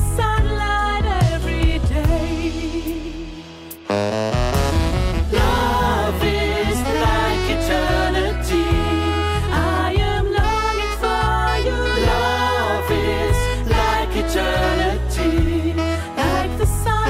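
No technical faults can be heard.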